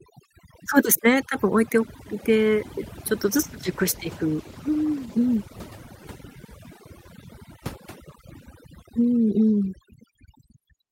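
From the start and all the way through, there's overdone noise removal. The suppressor was pushed too hard, so it's switching off individual frequency bands near its noise estimate and taking quiet bits of the speech with them. You get near-silent gaps with twinkly specks.

Then from 3.24 to 5.97 s there's a call bitrate drop. The encoder got starved of bits, and the sound points to a fall from roughly 32 to 15 kbps, bottoming out for about 1.9 s. The speech goes coarse, rougher and duller, before recovering.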